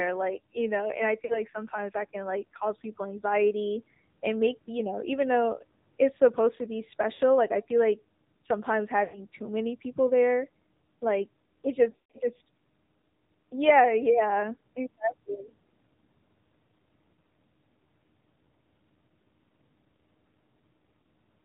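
Throughout the speech, the AMR narrowband mobile codec sets the character. Everything above 4 kHz is gone, so on a spectrogram the energy stops at a flat ceiling at 4 kHz. The voice has a buzzy, synthetic edge because the decoder rebuilds it from a vocal tract model driven by sparse pulses. The degree of damage points to a low mode around 7.4 kbps.

Lost AMR speech frames occur at 1.26–1.42 s, 7.14–7.21 s, 9.04–9.21 s, 11.90–12.18 s and 21.02 s. In each, frames failed their checksum and the decoder repeated its last good settings at falling gain. The sound smears and thins rather than cutting off. The waveform shows a decaying envelope, and the spectrogram shows harmonics stretched flat in time. The worst stretch is around 12 s, where gaps scatter over about a quarter second, with one run of about 140 ms that fades almost to silence before the voice returns rough.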